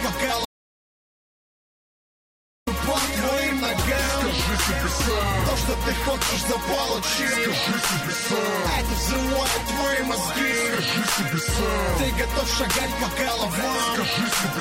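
Audio dropout to silence runs from 0.45 s to 2.67 s, about 2.2 s lost. The signal cuts abruptly to silence and resumes mid-flow, likely from a lost input. Unlike a noise gate or fade, no room tone survives and there's no ramp.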